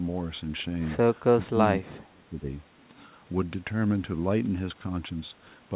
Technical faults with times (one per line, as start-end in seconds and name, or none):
1.38-2.47 speech suppressed in double talk